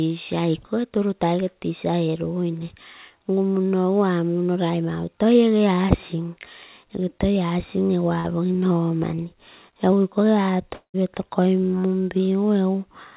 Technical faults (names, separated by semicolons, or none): short concealed packet loss; long network dropout